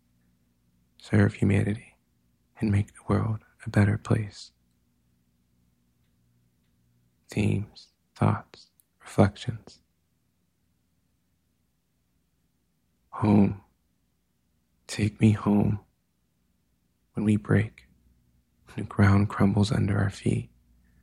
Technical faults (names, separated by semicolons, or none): none